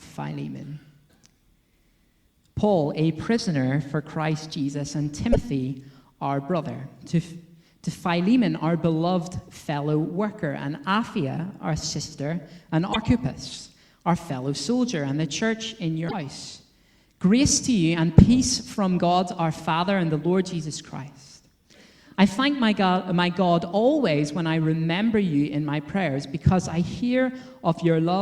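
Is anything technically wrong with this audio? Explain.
Yes. Three brief glitches occur at 5.32–5.36 s, 12.92–12.96 s and 16.08–16.14 s, each lasting about 40 to 55 ms and followed by the sound jumping ahead. The likely cause is a broken MP3 bit reservoir: frames were lost, and the next ones reached back for borrowed data that belonged to other frames, which fits roughly 26 ms MP3 frames. A plain dropout leaves clean silence. Here, the forward skip points to the reservoir.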